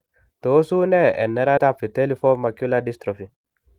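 At 1.57 to 1.59 s the speech makes a skip ahead: roughly 0.7 s of audio was dropped while later audio was already queued, so playback jumps forward with no gap or fill. Unlike a dropout, there is no silence or smoothing, just an abrupt splice where sounds are missing.

From 1.66 s to the end comes a jitter buffer speed-up: the receiver trimmed many short pitch-period pieces, around 150 ms in total, to reduce the excess delay. The speech runs about 7% faster but keeps its pitch, which distinguishes it from a sample-rate mismatch, where pitch rises too.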